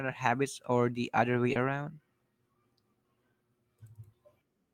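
At 1.53 to 1.57 s there is a brief smear in the speech, a short wobble where the sound seems to stretch and then blend back in. This is short concealed packet loss: about 20 ms of the call failed to reach the decoder in time, and the receiver covered the gap by extending the preceding sound before crossfading back into the arriving audio.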